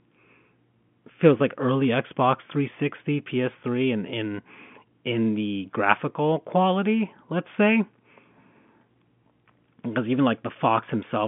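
Nothing's actually wrong with this speech clip: it's simply carried over ordinary G.711 telephone coding, so it has that familiar phone-line band of roughly 150 Hz to 3.4 kHz with nothing above about 3.7 kHz.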